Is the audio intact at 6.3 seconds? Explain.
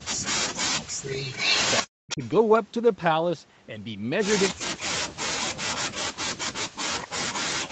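No. From 5.95 s to the end at 7.71 s, the speech dips sharply, by roughly 40 dB at its deepest. This is likely speech suppressed in double talk, where the echo canceller mistook overlapping talk for echo and attenuated it.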